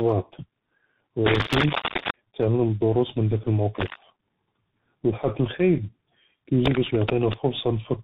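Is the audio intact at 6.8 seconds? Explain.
No. A worn cable or connector was likely being moved, its contact resistance jumping rapidly, so cable scratch noise runs from 6.65 to 7.35 s. Dense, uneven bursts of scratching roughly as loud as the speech lie over it at that moment.

The speech there also carries tandem speech coding. It was decoded and re-encoded between links, through G.723.1 at 6.3 kbit/s, then G.711 mu-law and CVSD at 64 kbit/s, each coder compounding the last one's damage. The result sounds rough, warbly and muffled, with nothing above 3.8 kHz.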